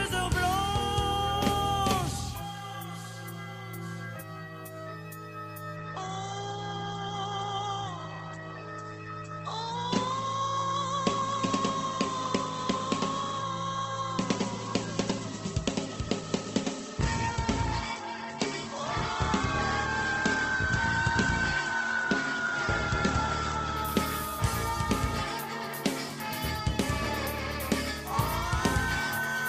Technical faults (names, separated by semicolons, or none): adaptive stream at a lower bitrate